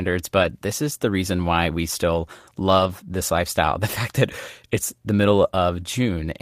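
At 0.39–0.45 s, before "this is the reason", and at 2.79–2.89 s, between "reason why we still" and "this lifestyle", lost packets were rebuilt from error correction. Low-bitrate backup copies fill the gaps, so nothing drops out, but those stretches sound rougher and noisier.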